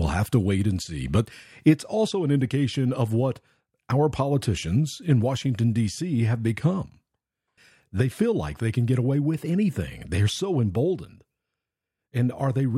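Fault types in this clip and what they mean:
There are no fault types in this clip, so there is nothing to explain.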